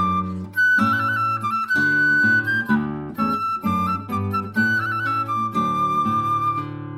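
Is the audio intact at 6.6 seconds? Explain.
Yes, the audio is intact at 6.6 seconds, with no dropout, click, distortion or other fault audible at that moment.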